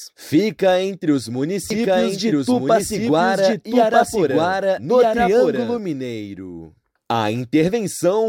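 From 1.70 s to 5.78 s there is a doubled audio track. A second copy of the sound runs about a second and a half behind, roughly as loud as the original. It has no reverb or tail. It cuts in and out abruptly. A slower duplicate capture path is the likely cause.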